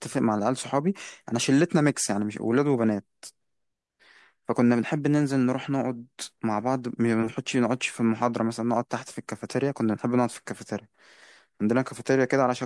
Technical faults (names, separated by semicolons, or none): none